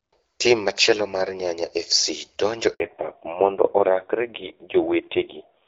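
Speech that cuts to silence for 60 ms, from 2.74 to 2.80 s, is a handover gap: the call switched networks and no speech frames arrived meanwhile. From 2.8 s to the end the voice turns duller and rougher, with nothing above 4 kHz. This is a fallback to narrowband from HD Voice, which fits a drop from AMR-WB at 12.65 kbit/s to AMR-NB at 5.9 kbit/s.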